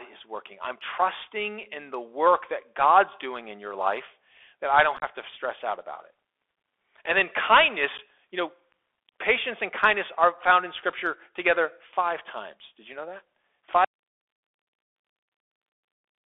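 Narrow, scratchy speech with a granular hiss under it runs throughout, the Bluetooth CVSD headset codec at 64 kbps, passing only about 300 Hz to 3.5 kHz, with s sounds roughened as the adaptive step fails to keep up. Short, chopped holes with abrupt edges break the sound from 4.97 to 5.04 s, where about 41 ms goes missing in pieces over roughly 53 ms, the longest gap 22.5 ms, and again at 7.98 to 8.00 s for about 11 ms: unconcealed Bluetooth headset packet loss, with lost voice packets replaced by silence or an idle pattern rather than patched over. At 13.85 s the speech cuts out abruptly and only hiss remains, about 55 dB down, until the end, an audio dropout to a faint residue, likely from the signal feed being lost while the path after the break stayed live.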